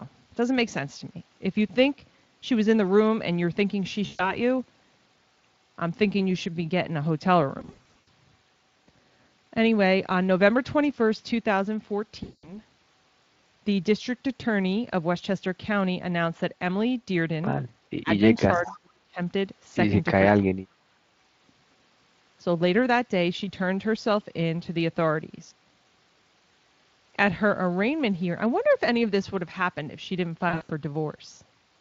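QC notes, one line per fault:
4.05–4.39 s, 7.59–8.08 s, 12.23–12.60 s and 30.49–30.70 s, VoIP packet loss concealed by the speech codec: each gap loses a chunk of audio, about 140, 280, 200 and 160 ms. The 7.6 s and 30.5 s events are scattered rather than solid. During each gap the decoder keeps repeating its last pitch and filter while fading the gain, so the sound smears into a buzzy tone or a coloured noise that fades. Because each frame feeds the next, it stays a bit weak just after packets resume.
18.01–18.12 s, 18.39–19.19 s and 20.62–21.00 s, speech suppressed in double talk: the speech sinks sharply, by roughly 25, 35 and 40 dB at its deepest, and parts drop out for about a tenth of a second, most of a second, and nearly half a second. This is likely the echo canceller ducking everything because the far side was talking over it and it couldn't separate the two.
18.64–18.74 s, echo leak: a faint ghost copy of the speech appears about 20 dB down, trailing by about 434 ms, right inside the second suppression stretch. 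That likely comes from a loudspeaker's output getting picked up by the microphone and not fully cancelled, so a delayed scrap was sent back. The Speex coding underneath only adds light roughness here.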